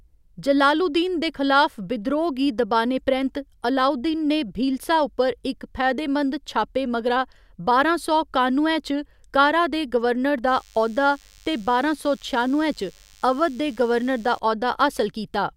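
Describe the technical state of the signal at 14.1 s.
DECT cordless phone buzz at 14.1 s (10.47–14.39 s, after "कारा दे गवर्नर"): 100 Hz radio bursts, rectified by the audio circuitry, give a thin, harmonic-rich buzz roughly 30 dB below the speech.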